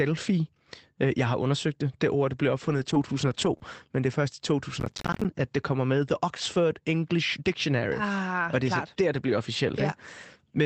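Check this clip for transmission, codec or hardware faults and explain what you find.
Three kinds of fault appear: repeated packet loss recovered by error correction, one brief concealed dropout, and a burst of processor-overload crackle.

From 2.65 to 3.55 s, after "ord det blev" and before "men det er først", there is lost packet rebuilt from error correction. Many lost packets were replaced by low-bitrate copies carried in later packets, so the sound turns rough and noisy but never gaps. That continuity is what separates it from concealment.

At 3.57 to 3.62 s there is short concealed packet loss. About 20 ms never arrived, and the decoder extended the preceding sound to fill it. The result is a brief smear rather than the grainy texture of the rebuilt stretches around it.

From 3.62 to 3.64 s, just before "men det er først", a single further packet was rebuilt from error correction. 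This gives another 20 ms of coarse, noisy sound.

From 4.80 to 5.25 s, between "det er først i" and "at det kommer med", there is processor overload crackle. Roughly twenty buffers of about 10 ms each missed their deadlines and were each filled with silence. The hard-edged gaps pile into gritty tearing, unlike a single smooth concealment.

The Opus call path underneath is audibly limited to about 8 kHz, which fits a bitrate around 24 kbps.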